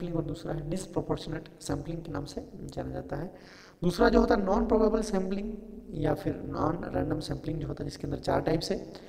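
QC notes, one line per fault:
throughout: overlap-add ripple. A harsh, metallic buzz at around 200 Hz, with the level dropping by about 60 dB each cycle so the sound almost gates off between pulses. Windowed frames were overlap-added without summing to constant gain, so the level swings once per frame.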